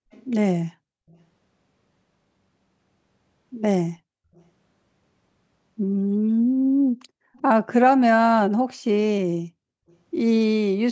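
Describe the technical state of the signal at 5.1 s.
At 5.1 s the signal is intact, with no fault present, only the normal band-limiting of call microphone processing, which leaves nothing above 8 kHz.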